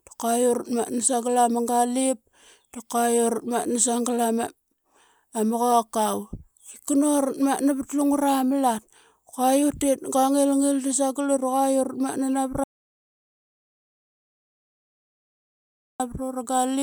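At 12.64 s the speech breaks off mid-flow into an audio dropout to silence lasting about 3.36 s, until sound resumes at 16.00 s. The input was likely lost, perhaps through a disconnected device or a stray mute, while recording carried on writing silence. What sets it apart from a natural pause or a noise gate is the total absence of room tone: the gap is dead digital silence, and the speech is cut off abruptly at both edges rather than fading.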